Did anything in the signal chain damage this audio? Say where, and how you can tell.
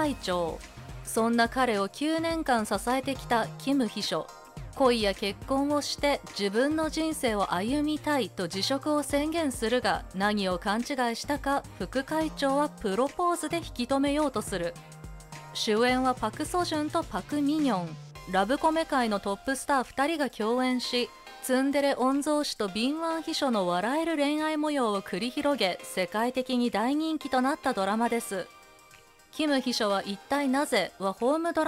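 No, nothing in the chain left a mark I can hear, so there's no stage to point at here.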